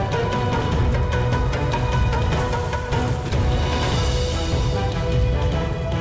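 No technical faults are audible; the audio carries a normal call-path signature, with nothing above 8 kHz, consistent with a 64 kbps G.722 wideband link.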